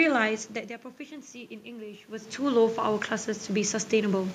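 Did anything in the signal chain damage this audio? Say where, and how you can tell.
Yes. The automatic gain control in the call processing stage responded when the input level fell by about 15 dB and raised its gain gradually by about 5 dB between 1.63 s and 4.3 s. The swell shows it was the processor: the room noise grows together with the speech over more than two seconds. A talker moving, as happens near 0.5 s and 2 s, changes only the voice level and leaves the background where it was.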